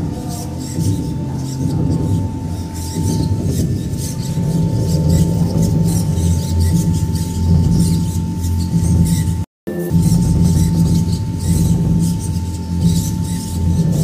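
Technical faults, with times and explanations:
9.44–9.67 s, playback stall: the player likely ran short of buffered data or had its output thread held up, so nothing reached the output for about 230 ms. The sound cuts out mid-flow, leaving a clear gap before it resumes where it stopped.
9.67–9.90 s, catch-up at higher speed: to recover the lost time, the player resamples its backlog at 2.0× speed. For roughly a quarter of a second the sound runs twice as fast and jumps up by about ten semitones, then drops straight back to normal.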